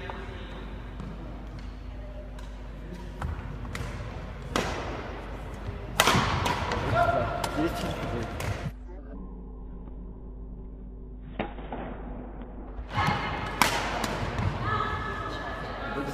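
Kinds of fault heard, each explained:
Mains hum: a steady low tone at 50 Hz, with some low harmonics above it, runs under the sound for the whole clip. It comes from the power line leaking into the signal through a ground loop or a nearby transformer. Here it is loud, around 10 dB below the wanted sound. Its fixed pitch and unchanging level set it apart from rumble, which is broadband and uneven, and from a buzz, which carries many strong harmonics.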